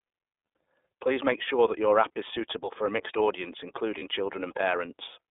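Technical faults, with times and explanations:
Throughout: iLBC codec. The signal passed through a narrowband VoIP coder that codes each frame's excitation independently, so nothing survives outside roughly 300 Hz to 3.6 kHz. The speech is plainly rough and synthetic-edged, which fits the 30 ms frame mode at about 13 kbps.
2.13–2.17 s: lost iLBC frames. Between "make sure that your" and "is suitable for a", the decoder lost audio data, which fits a single 30 ms frame, and filled it by repeating the last pitch cycle mixed with noise. This gives a brief held, buzzy vowel, with the speech recovering immediately afterwards.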